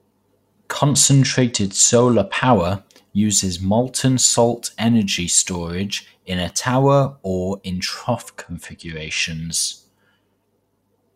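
A congested Bluetooth link twice forced a Bluetooth SBC bit pool drop in this speech recording, from 0.91 to 2.55 s and again from 8.18 to 9.24 s. Each time the encoder fell back to a much smaller bit budget, consistent with a bit pool cut from about 28 to 11 (roughly 90 kbps). The highest sub-bands were starved and the rest coarsely quantised, so the treble goes dull and a gritty noise rides over the voice until the rate recovers.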